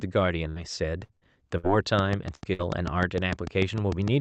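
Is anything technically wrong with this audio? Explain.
Yes, there are two faults.

Bursts of packet loss occur at 0.49–0.59, 1.04–1.13, 1.16–1.24, 1.57–1.66, 2.35–2.44 and 2.53–2.62 s. Each time, a run of call packets never arrived in time, so the receiver stretched the last received sound for about 60 ms while fading it down. This is heard as a brief held buzz or fading hiss. The speech then jumps ahead, with roughly 60 ms of audio gone at each gap.

A train of clicks starts at 1.99 s and runs to the end. Sharp, similar pulses arrive at a steady 6.7 per second, peaking around 10 dB above the speech, and they tick through the pauses as well as over the talking. The regular spacing suggests the likely cause is electrical interference or a faulty connection or power supply. This all sits within the call's Opus coding, whose band limit cuts the sound off above 8 kHz.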